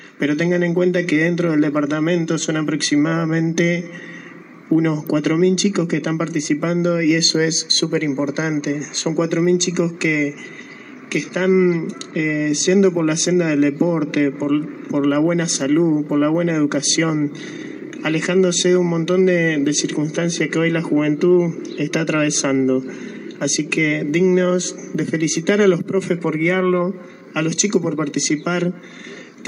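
At 5.07 s a single sharp snap sits on top of the sound: an electrical switching spike, likely from a nearby switch or discharge arcing into the line. It peaks at roughly -20 dBFS, and unlike a dropout the underlying audio continues uninterrupted beneath it.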